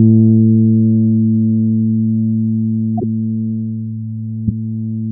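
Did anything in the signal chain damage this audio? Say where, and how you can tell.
Yes. The damage happened at the codec stage: a corrupt frame was decoded and played. Two short bursts break through the sound, from 2.98 to 3.04 s and from 4.47 to 4.51 s. Each is a harsh blip that peaks around -5 dBFS and sounds unrelated to the surrounding audio. Flipped bits made the decoder misread gains and spectral codes, so energy landed at the wrong frequencies. The first burst fits a couple of damaged frames, the second several short ones.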